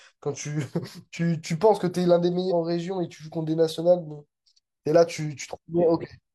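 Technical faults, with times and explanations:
2.47–2.52 s: damaged data in a compressed stream. For about 57 ms the speech is broken. Corrupted bytes at that point made the decoder misread frames, lose sync and hunt for the next valid frame header before resuming.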